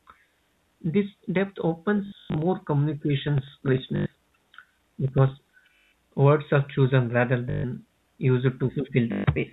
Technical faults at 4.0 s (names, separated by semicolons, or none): periodic USB or driver dropouts; packet loss with last packet repeated